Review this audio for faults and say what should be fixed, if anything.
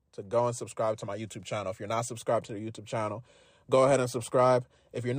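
No faults; nothing needs fixing.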